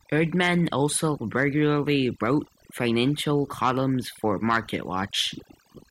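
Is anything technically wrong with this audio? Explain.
Yes. Overdone noise removal affects the whole speech clip. The noise reduction was set far too aggressively, so it cut individual frequency bands whenever they sat near its noise estimate. That took the quieter parts of the voice along with the noise. The background drops and breaks up into twinkling specks.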